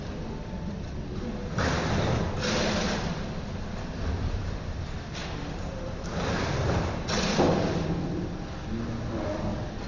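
A recording of sounds, affected by wrong sample rate from start to finish. Everything runs at one third of its proper speed. Pitch drops by 19 semitones, so events sound low and slow. That ratio fits audio captured at 48 kHz but played at 16 kHz without conversion.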